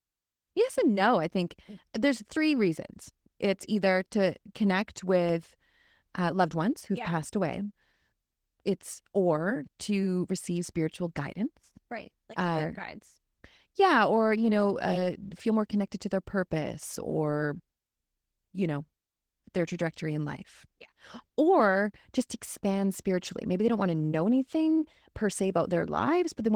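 Throughout the speech, the sound is slightly hoarse and robotic, and muffled. This is plainly audible Opus voice compression. The coarse hybrid coding, linear prediction below 8 kHz with a transform layer above, points to a low bitrate near 16 kbps.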